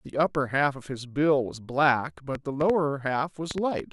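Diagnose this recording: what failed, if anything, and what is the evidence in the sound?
A train of clicks, 2.35 to 3.81 s: roughly seven irregular pulses at 3.5 per second, about 10 dB above speech; likely interference in the analogue wiring.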